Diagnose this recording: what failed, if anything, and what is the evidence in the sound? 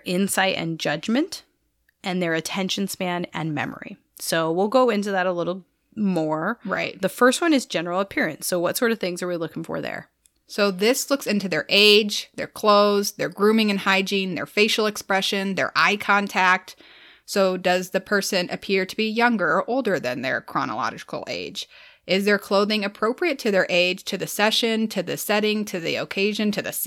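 Hard clipping, likely at a gain or converter stage: peaks are cut flat at 11.75–11.96 s after "this looks into their", 12.69–12.73 s before "their grooming and", and 15.78–16.53 s after "their facial expression their". Overdrive of about 1 to 3 dB flattens the tops, adding high harmonics heard as crackle.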